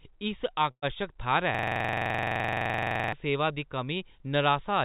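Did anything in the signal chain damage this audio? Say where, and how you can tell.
Yes. Burst of packet loss, 0.71 to 0.85 s, network stage: about 120 ms of speech goes missing, concealed as a held, fading sound before the speech resumes further on.

System hang loop, 1.55 to 3.13 s, driver or buffer stage: a 42.67 ms slice repeats at 23.4 Hz, a rattling stutter that fits a 2048-sample buffer, ending before "सेवा दी".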